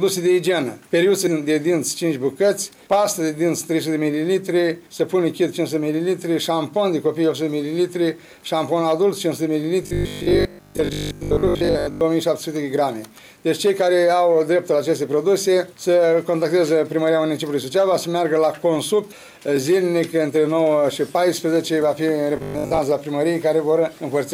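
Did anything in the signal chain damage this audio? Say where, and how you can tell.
Yes. Robotic sound from repeated short buffers, 9.83–12.01 s and 22.37–22.79 s: a rigid 50 Hz buzz replaces most of the sound. Likely a driver or buffer underrun looping 20 ms blocks.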